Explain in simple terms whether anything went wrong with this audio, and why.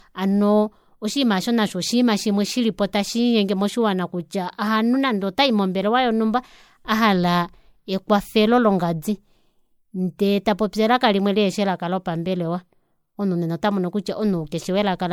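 Throughout the recording, from the first second to the last, the speech has a swirly, watery quality. It sounds hollow, as if heard through a tube, and the starts of sounds are smeared rather than crisp. This is generation loss, and the likely cause is that the audio was saved as an MP3, opened, and saved as MP3 again, roughly four times. Each save throws away a little more detail in slightly different places, so the damage builds up.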